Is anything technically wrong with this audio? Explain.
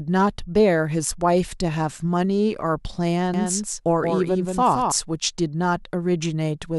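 Yes. A doubled audio track runs from 3.34 to 4.92 s: the speech is joined by a second full-band copy trailing about a fifth of a second behind and roughly 5 dB quieter. The copy has no reverberant tail, and it cuts in and drops out abruptly. A second, slower capture path mixed back in is the likely cause.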